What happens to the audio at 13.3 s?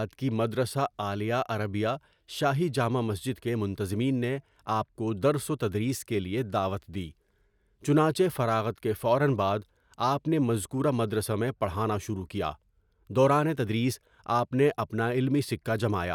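At 13.3 s the speech carries on intact, with no dropout, click, distortion or other fault.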